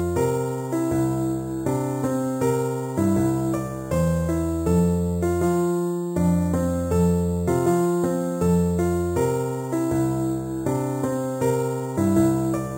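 Imaging from sample-and-hold upsampling runs through the whole clip. A bright metallic fizz tracks the sound's level, about 22 dB below it. The lowest mirror copy sits between 4 and 8 kHz. This points to 8 kHz material raised to 44.1 kHz by repeating samples without smoothing.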